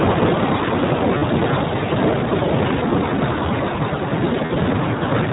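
From the start, the speech is carried by the iLBC codec, a narrowband VoIP coder that codes each short frame independently. The bandwidth stops at 4 kHz, so the sound is muffled and lacks sibilant detail, and the coding damage is plainly audible as a rough, slightly synthetic texture on the voice. The steady granularity fits a rate near 15.2 kbps with 20 ms frames.

At 1.18 s and again at 4.46 s there are lost iLBC frames, each gap lasting about 40 ms, which fits two missing 20 ms frames. The decoder fills each hole by repeating the last pitch cycle mixed with noise, so the voice briefly freezes into a held, faintly buzzy tone. Since iLBC frames stand alone, normal speech returns right after each gap without a lingering smear.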